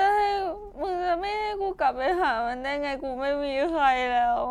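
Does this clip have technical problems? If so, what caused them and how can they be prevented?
No, nothing here goes wrong technically, so there's nothing to trace back or guard against.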